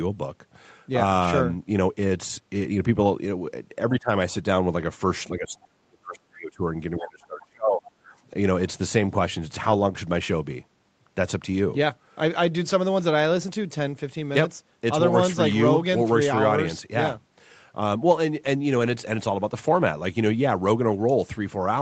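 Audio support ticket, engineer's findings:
Speech level dips sharply in three stretches: 3.91–4.09 s, brief, down about 20 dB; 5.31–6.66 s, near cut-out, about 40 dB; 6.98–8.11 s, about 30 dB. Pattern likely speech suppressed in double talk. Echo canceller unable to separate near talker from far-end echo while both speak, so it attenuates both.

Short rough, noisy patches with no gap: 4.37–4.39 s, 9.47–9.81 s (longest), 14.31–14.33 s, 18.81–18.95 s. Lost packet rebuilt from error correction. Opus in-band FEC: each lost packet replaced by the low-bitrate copy carried in the next packet, hence coarser texture. Longest patch fits a run of 20 ms frames. Wideband path tops out at 8 kHz, so no extra high-end dip in rebuilt frames.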